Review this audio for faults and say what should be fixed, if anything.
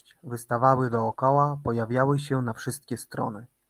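From 0.87 to 1.13 s, just before "pojawiały się na", the speech turns rougher and grainier for about 140 ms, though there is no gap. This is a lost packet rebuilt from error correction: seven separate packets, consistent with seven 20 ms frames, went missing, and the decoder played the low-bitrate backup copies carried in the following packets instead. Those copies keep the speech continuous but lose detail and add noise. To prevent it, reduce packet loss on the network path, for example with a more stable connection or better jitter buffering.

At 1.15 to 1.19 s, still just ahead of "pojawiały się na", there is a brief smear or wobble lasting about 20 ms. This is a short concealed packet loss: one packet arrived too late for the decoder and no backup copy was available, so the receiver extended the preceding sound to fill the hole and then blended back into the real signal. A larger jitter buffer or a less congested network link would prevent this.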